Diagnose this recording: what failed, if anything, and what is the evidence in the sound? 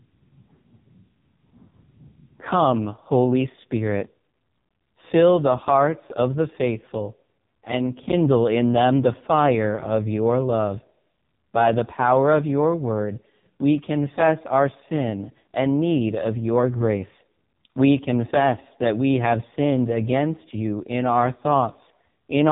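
The speech passed through an AMR narrowband mobile codec at the codec stage for the whole recording. Nothing above 3.7 kHz survives, and the heavy buzzy, synthetic quality suggests one of AMR-NB's lowest modes, around 5 kbps, where few excitation pulses drive the vocal-tract model.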